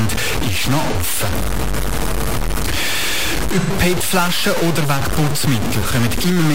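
Throughout the speech there is a coarse, grainy distortion whose grit rises and falls with the voice and vanishes in pauses rather than hissing on. The distortion is nearly as loud as the speech itself. That signal-following character, unlike steady noise, points to low bit depth without dither, likely truncation to about 3 bits.

AAC frame loss with concealment appears at 0.90 to 0.96 s, just after "ist noch", at 3.60 to 3.70 s, and at 5.81 to 5.88 s. Each gap is filled with a smeared, phasey stretch rather than hard silence, because the decoder extends the last good spectrum. The gaps last about 43 ms, 85 ms and 43 ms, which fits the loss of one or two AAC frames each.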